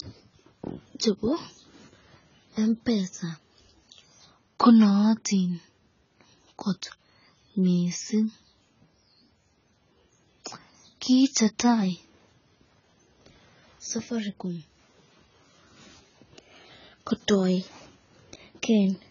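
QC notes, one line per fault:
Throughout, AAC compression: the speech has nothing above 7.1 kHz and sounds dull, smeared and watery, with a fizzy, warbling edge on sibilants and held vowels. On a spectrogram the energy stops at a flat ceiling near 7.1 kHz, with patchy holes and blotchy noise-like fill below it. The likely cause is heavy AAC-LC coding that drops and coarsely quantises frequency lines frame by frame. The damage fits a bitrate around 16 kbps.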